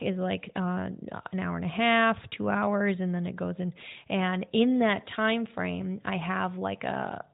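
No faults: the speech comes through the AMR narrowband mobile codec path with the expected 4 kHz band limit and nothing beyond it to flag.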